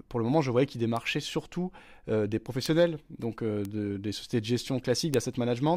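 Four bit error spikes land at 0.97, 2.66, 3.65 and 5.14 s in this speech. Each is a flipped bit jumping a sample or few by a power of two, peaking about -16 to -10 dBFS, heard as a sharp broadband tick unrelated to the sound.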